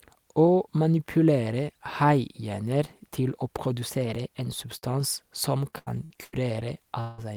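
A speech clip with four separate problems. Right after "manipulere haihjerner til å", from 3.90 to 4.52 s, the audio runs about 5% fast and sits nearly a semitone sharp (about 89 cents), likely a drift correction step. At 4.78 to 4.84 s there's a short concealed packet loss: about 40 ms went missing and got papered over with a brief smear. From 5.70 to 6.34 s comes repeated packet loss with that choppy robotic sound, with several holes adding up to about 240 ms, the longest near 84 ms, so over a third of the stretch is patched. Then at 7.00 to 7.20 s roughly 180 ms is gone and filled with a fading synthetic continuation, likely a long network dropout.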